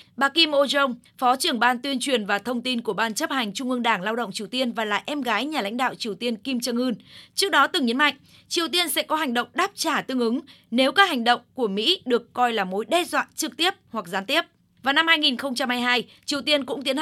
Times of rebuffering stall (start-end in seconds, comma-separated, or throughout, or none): none